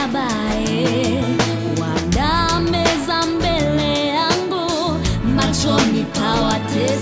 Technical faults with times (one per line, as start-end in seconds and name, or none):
none